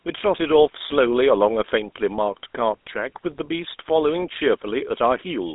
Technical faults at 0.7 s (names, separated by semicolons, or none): GSM full-rate codec